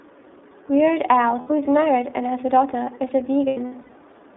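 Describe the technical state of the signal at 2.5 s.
At 2.5 s you're hearing iLBC codec coloration, which runs through the whole clip rather than kicking in at that point. The speech is squeezed into a phone-line band of about 250 Hz to 3.6 kHz, so it sounds thin and boxy. Each 30 ms chunk gets its excitation coded independently of the previous one, which gives the voice a plainly rough, slightly synthetic grain. That frame length fits the 13.33 kbps mode.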